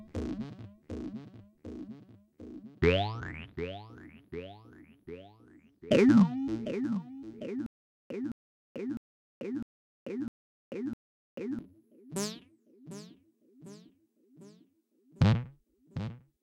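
The playback likely stalled from 7.66 to 11.59 s, replaying its last fragment at each retry: a stutter with silent gaps. A 214 ms burst of sound repeats six times every 654 ms, with 440 ms of dead silence between, and the audio due then is lost.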